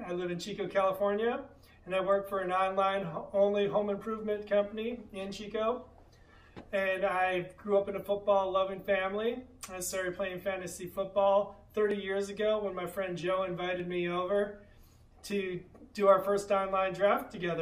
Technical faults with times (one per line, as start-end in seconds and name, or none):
11.91 dropped buffer (overrun)
13.80 dropped buffer (overrun)